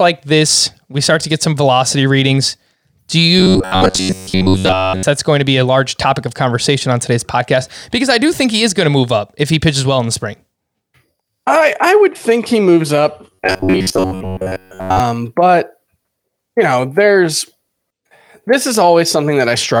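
From 3.39 to 5.04 s, just before "that's going to be", and again from 13.33 to 15.00 s, right after "think he moves up", the speech collapses into robotic sound, likely from repeated short buffers: a slice of about 10.7 ms is looped while most of the real audio is skipped. That loop imposes a rigid 93.8 Hz metallic buzz. A spectrogram shows evenly spaced, flat harmonic lines, and the waveform shows identical short cycles repeating.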